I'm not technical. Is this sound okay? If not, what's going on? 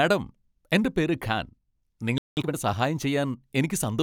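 No. At 2.18 s the speech cuts out for about 0.19 s, a playback stall. It most likely happened because the player briefly ran short of data.

From 2.37 to 2.55 s, time-compressed catch-up follows as the player makes up the delay, running the speech at double speed. Unlike a sped-up tape, the pitch stays normal.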